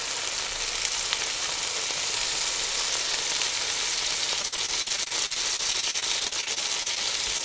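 From 4.42 to 6.98 s the audio turns choppy and robotic from repeated packet loss. About two dozen short holes, none longer than 42 ms, were each patched by extending the preceding sound, so roughly a fifth of that stretch is synthetic. Unlike a single glitch, the holes arrive back to back, giving a sustained choppy stutter.

At 7.38 s, on a call path that carries nothing above 8 kHz, a short concealed packet loss leaves one brief smear lasting a few hundredths of a second. About 20 ms of audio never arrived and was bridged by continuing the last sound before blending back. It is a single isolated blur rather than a rhythmic pattern, and it produces no silent gap.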